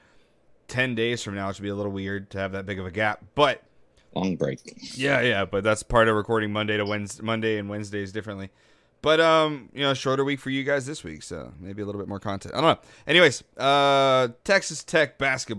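No technical faults can be heard in this recording.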